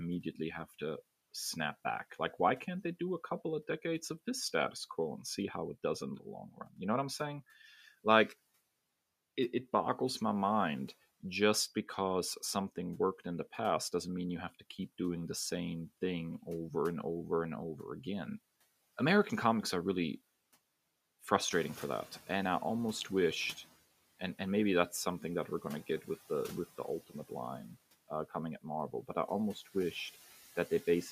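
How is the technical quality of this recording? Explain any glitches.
The recording has three processing faults, one running through the whole speech clip and two confined to its final ten seconds.

Noise suppressor artifacts, throughout: the suppressor pulls down every band it judges to be steady noise, frame by frame, by about 14 dB. The background therefore dips between phrases and swells under the speech.

Noise suppressor catching up, 21.5 to 23.68 s: the room noise jumps by about 13 dB at around 21.5 s, and the suppressor's noise estimate trails behind for 2.18 s. The louder background passes through with only about 10 dB of reduction at first, then sinks as the estimate settles. The room noise itself is genuine, sitting about 19 dB below the speech after the rise.

De-emphasis applied wrongly, 26.16 s to the end: a treble-cutting filter was applied to audio that never had matching pre-emphasis, or was applied twice. 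The response slopes smoothly downward, reaching about 13 dB below 1 kHz at 10 kHz, so this closing stretch sounds dull and muffled.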